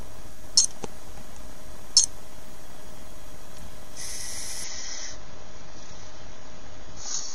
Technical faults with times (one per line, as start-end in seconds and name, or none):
4.64-7.34 adaptive stream at a lower bitrate